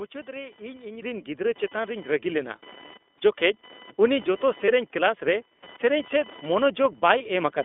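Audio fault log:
Throughout: computer activity noise. A faint buzz at roughly 1 kHz sits about 20 dB below the speech, from computer load currents leaking through the shared audio ground.
Throughout: iLBC codec. The speech sounds rough and synthetic and is confined to about 250 Hz to 3.6 kHz, which fits iLBC's 20 ms, 15.2 kbps narrowband mode.
0.42–0.45 s, 2.88–2.91 s, 4.66–4.70 s, 7.18–7.22 s: lost iLBC frames. Each is a brief buzzy, held-vowel blip of about 20 ms, where the decoder repeated the last pitch cycle over a lost packet, then recovered at once.
1.02 s, 2.04 s: microphone volume stepped up. Speech and background jump together, by about 8 dB just before "ᱜᱤᱫᱽᱨᱟᱹ ᱪᱮᱛᱟᱱ", then by about 3 dB, as the software raised the input gain.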